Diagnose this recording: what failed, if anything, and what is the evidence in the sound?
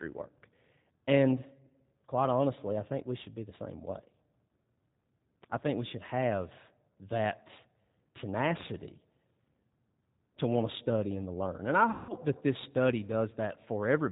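Throughout the clip the speech is band-limited to telephone width, with nothing above 4 kHz, and has a rough, slightly synthetic texture. That is plainly audible G.729 codec damage, and its character points to the 8 kbit/s G.729A variant. The failure sits at the codec stage. The voice is rebuilt each 10 ms frame from a vocal-tract filter, a pitch predictor and a few sparse pulses, so fine detail is lost and the result sounds buzzy and artificial.

From 11.91 to 12.14 s the speech smears into a fading buzzy tone or coloured noise before "that this study" resumes. It stays weak or distorted for a moment after. This is VoIP packet loss concealed by the speech codec. The gap is a network fault covering about 180 ms, which fits a run of roughly six 30 ms packets. The decoder filled it by extrapolating its last pitch and filter with falling gain. Because each frame depends on the previous one, recovery lags.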